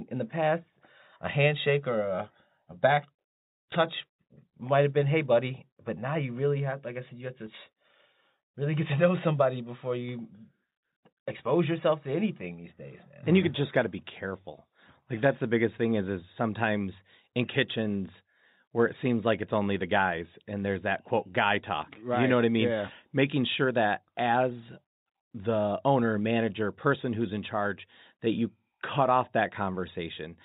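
No technical faults occur at any point in this speech.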